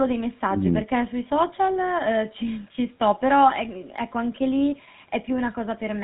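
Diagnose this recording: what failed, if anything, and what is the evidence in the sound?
Codec stage: GSM full-rate coding throughout, audibly buzzy and gravelly, nothing above 4 kHz, consistent with the 13 kbps pulse-excited vocal-tract model discarding excitation detail.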